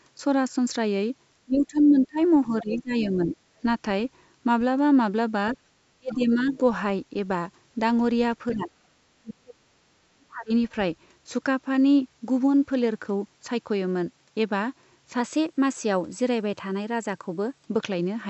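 From 1.45 to 3.37 s the speech dips by up to about 20 dB, speech suppressed in double talk, likely because the echo canceller turned down the near talker while the far side was also active. Further drops follow at 5.94–6.61 s (about 35 dB), 8.53–8.70 s (about 10 dB) and 9.11–10.51 s (about 40 dB), where the speech fades or breaks into pieces.

In the same stretches, the other side's voice leaks through as faint scraps at 3.02–3.07 s, 6.11–6.57 s and 8.52–8.57 s. They sit roughly 15 to 20 dB below the speech and are likely loudspeaker echo that the canceller left in the microphone signal.

From 15.20 to 17.65 s a drift correction step speeds the audio up by 5.2% and raises the pitch by 88 cents, nearly a semitone. This is likely the clock-matching software changing the playback rate in a single jump to rebalance its buffer.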